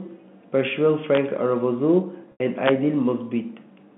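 Around 1.15 to 1.17 s there's an integer overflow: a peak only just reached the integer ceiling, wrapped to the opposite sign instead of being limited, and snaps out as a sharp crack.

From 2.32 to 2.40 s we get packet loss with pitch repetition: about 80 ms went missing, which fits four 20 ms packets. The receiver loops the last pitch period, so you hear a short buzzy hold that fades before the speech cross-fades back in.

Then at 2.66 to 2.71 s the integer overflow hits again, harder this time. The level overshoots by about 3 dB, flips across the full range and gives a violent crack, much harsher than ordinary clipping. All of this rides on a normal G.711 telephone band.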